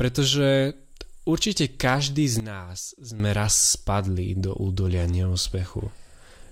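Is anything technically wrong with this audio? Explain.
Yes. A sudden gain jump runs from 2.4 to 3.2 s, after "určite každý z". The level drops abruptly by about 12 dB and snaps back before "raz spadli do údolia". This is likely a gain setting applied with no ramp. Background noise falls together with the speech, which is what separates it from a fade or compressor pumping.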